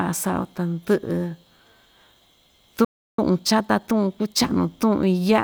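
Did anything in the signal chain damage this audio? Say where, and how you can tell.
Yes. At the playback stage, a playback stall cuts the speech off from 2.85 to 3.19 s, a 0.34 s silence, likely because the player's buffer ran dry.

Time-compressed catch-up follows from 3.19 to 4.53 s. Speech runs 1.25 times fast at normal pitch, as the player splices out short segments.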